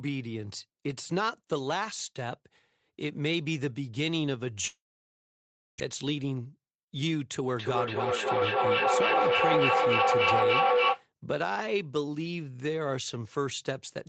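At 4.67 s the receiver most likely suffered a long network dropout: packets stopped arriving and about a second of speech was never delivered. Concealment stretches the last sound into a fading buzz, then leaves silence until 5.82 s, when the speech resumes further along with that second gone. The gap adds roughly a tenth of a second of extra delay to the stream.

That backlog triggers a jitter buffer speed-up from 5.90 to 7.03 s. To shed the surplus delay, the receiver repeatedly cuts out short pitch-period slices, removing around a tenth of a second in total. Playback runs at about 109% speed while the pitch stays put, so the speech sounds hurried and clipped in rhythm before settling back to normal pace.

From 7.59 to 11.08 s there is feedback echo between two devices sharing a room. One device plays the other's incoming audio, its microphone recaptures it, and neither echo canceller catches sound coming from the other unit. 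Each phrase returns at intervals of roughly 0.3 s, repeating and thinning into a metallic ring. The loop is strong enough that the build-up peaks at about 5 dB above the direct speech, smearing it under stacked copies. Across the clip the audio is band-limited to 8 kHz by the call codec.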